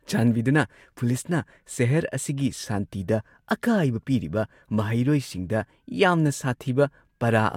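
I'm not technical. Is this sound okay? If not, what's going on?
Yes, this sound is okay, and nothing is going on that needs fixing.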